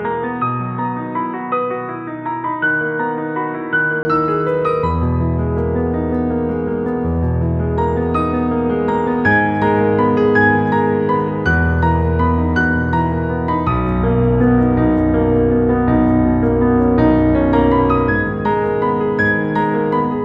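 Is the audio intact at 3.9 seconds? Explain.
No. From 0.0 to 4.05 s the sound is dull and boxy, with nothing above 3.8 kHz, a level about 5 dB lower and a faint noise floor, likely from an input switched to a poorer device. A spectrogram shows energy cut off at 3.8 kHz until a 20 ms flat gap at 4.05 s, after which the full band returns.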